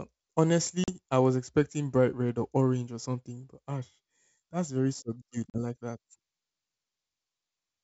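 At 0.84 s, just before "I was expecting bright", and again at 5.50 s, after "ash that's very subdued", packet loss on an ADPCM call cuts about 40 ms to hard-edged silence. The decoder's predictor and step size lose sync, so speech resumes with brief distortion.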